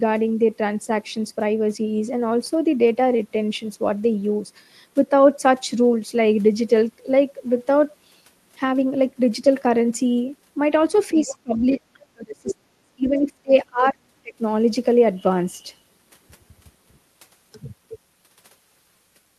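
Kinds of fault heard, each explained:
Other side's voice leaking through: A second voice surfaces in short scraps, at 10.96 to 11.1 s, 11.26 to 11.36 s, 11.57 to 11.98 s and 12.47 to 12.54 s. It sits well under the main speech, roughly 10 to 30 dB down. The loudest scrap is near 12.5 s. This is likely far-end audio from a loudspeaker reaching the microphone, with the echo canceller failing to remove all of it.
Speech suppressed in double talk: The main speech dips hard while the far side is talking over it. This happens at 11.12 to 11.81 s, 12.07 to 14.02 s and 14.22 to 14.42 s. The drops reach roughly 25 to 35 dB. The longest stretch loses well over a second of level. The likely cause is an echo canceller that could not separate the talker from the echo, so it turned both down.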